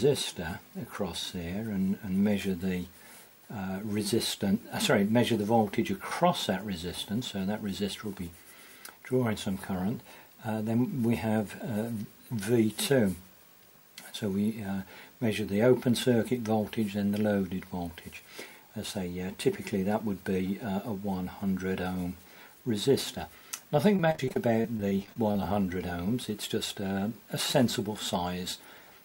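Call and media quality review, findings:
Repeated packet loss (robotic sound), 23.76–25.39 s. Choppy, robotic stretch from a dense run of short holes, the longest about 29 ms. Component: network path / jitter buffer. Mechanism: late or lost packets patched by extending the previous sound, covering roughly a fifth of the span. Unlike a single dropout, the gaps recur in quick succession, so the repeated patching turns the sound robotic.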